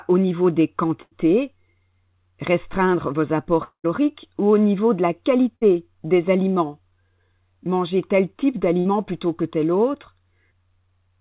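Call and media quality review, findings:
Burst of packet loss, 1.02–1.14 s, 5.56–5.63 s, 8.79–8.87 s: jitter buffer concealment repeats the last frame as a fading buzz or hiss for 56–91 ms, then jumps ahead. Waveform shows a decaying repeated cycle; spectrogram shows a smeared, fading band.

Long network dropout, 3.64–3.86 s: about 200 ms of speech lost, most likely a network dropout. The last sound is held as a decaying buzz or hiss, then about 100 ms of silence. Spectrogram shows a stretched, fading band, then a blank gap.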